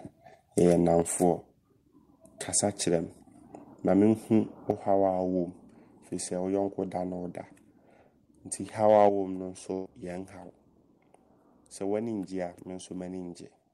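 A speech recording with three kinds of fault. The level drops suddenly by about 6 dB at 1.02, 4.71 and 9.09 s. The likely cause is a microphone volume step-down by the call software. From 8.89 to 9.07 s the loudest peaks sound harsh and crackly, about 1 dB past the converter's limit. About 4% of the samples have their tops cut off. This is likely microphone overload, and it likely triggers the step-down that follows it. At 9.73 s a burst of packet loss leaves about 120 ms missing. The receiver fills the gap with a fading continuation of the last sound, until 9.88 s.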